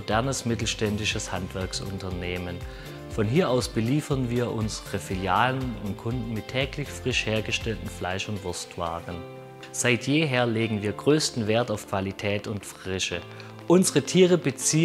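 From 11.01 s to 14.80 s a train of clicks runs at a steady 10.8 per second, about forty similar ticks roughly as loud as the sound itself, likely from electrical interference or a faulty connection or power supply. Their even spacing and matching shape set them apart from random crackle.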